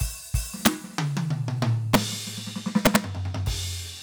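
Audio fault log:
0.66 s, 1.94 s and 2.86–2.96 s: integer overflow. Peaks about 3 to 5 dB past full scale wrap to the opposite sign instead of being held at the limit, so each one snaps across the whole range. The result is violent cracks, far harsher than the flattened buzz of clipping.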